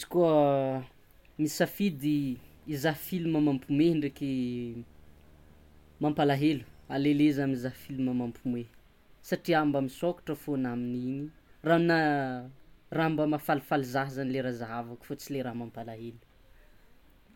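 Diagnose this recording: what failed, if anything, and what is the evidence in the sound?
What failed is in the analogue wiring: there's a video or display buzz riding under the speech from 2.16 s to 8.37 s. It's a 75 Hz buzz with a spray of hash on top, sitting roughly 30 dB below the voice. That 75 Hz lines up with a monitor's field rate, so a screen or its video cable was coupling into the audio lines, and the buzz drops out once that coupling stops at 8.37 s.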